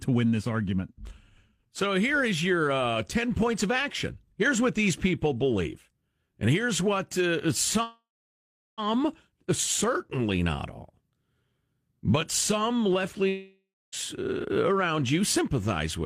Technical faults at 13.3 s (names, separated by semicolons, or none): long network dropout